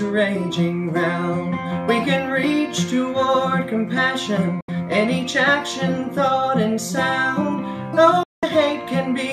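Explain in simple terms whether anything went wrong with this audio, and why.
Digital broadcast dropouts at 4.61 to 4.69 s and 8.23 to 8.43 s: the sound fades to silence within a few milliseconds, then returns. The receiver muted when incoming data arrived damaged or missing, roughly 70 ms and 190 ms of audio, and that sound is lost.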